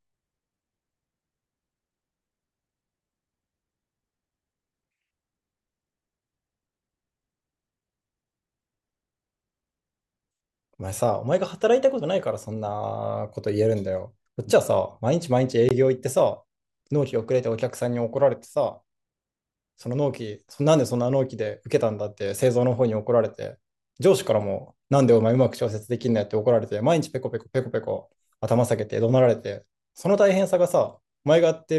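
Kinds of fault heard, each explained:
Gap at a join of encoded pieces: at 15.69 s the speech drops out for about 19 ms, then resumes exactly where it stopped. Two separately encoded pieces were joined untrimmed, so leftover encoder start delay and end-frame padding remain as a silence with smeared edges.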